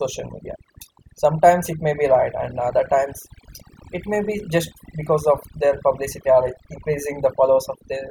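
Speech, and it's been hit with overdone noise removal all the way through. The noise reduction was set too aggressively, so it's clamping individual frequency bands right down whenever they sit close to what it thinks is noise. Between phrases the background drops and breaks up into little twinkly specks, and the softer parts of the voice get swallowed along with the noise.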